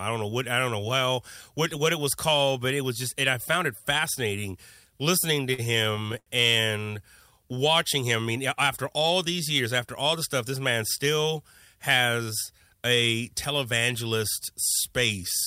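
Speech, with repeated stalls (stutter) between 5.35 and 6.28 s: nine brief holds, the longest 75 ms, stretch the last sound while late packets arrive. Nothing is lost, unlike dropouts, so it drags rather than skips.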